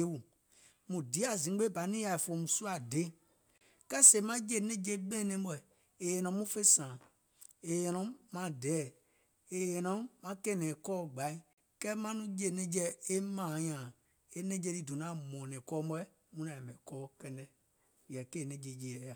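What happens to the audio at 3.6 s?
At 3.58 s the speech cuts out and the output goes completely silent for about 29 ms, until 3.61 s, when the sound comes back in as though it had carried on underneath. This is most likely a Bluetooth dropout: audio packets failed to reach the headphones in time and were discarded, leaving a hole rather than a stretched or repeated section. A gap of that length fits roughly two lost packets.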